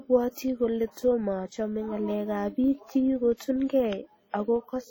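A steady buzz at 25 Hz runs under the speech from start to finish, rising and falling with the level of the voice. This is a filter restarted on every block: the filter loses its memory at each block boundary and begins again from silence, so every block opens with a small transient. Twenty-five of these per second merge into a buzz, and because each transient scales with the signal, the buzz tracks the speech's loudness.

Also present throughout is heavy codec damage: a ringing, washy quality with hiss that swells and fades with the speech. This is likely WMA compression, and the amount of damage fits a low bitrate of around 32 kbps. A transform codec of this kind quantises long blocks, spreading its noise over tens of milliseconds and dropping weak spectral detail, which produces the smeared, breathing texture.

From 3.36 to 3.40 s, a short burst of hiss arrives just ahead of an attack, and the onset sounds softened. 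This is pre-echo. The codec spreads quantisation noise evenly across a block. The sharp onset falls late in its block, so noise sized for the loud part also fills the quiet lead-in, smearing about 43 ms before the attack.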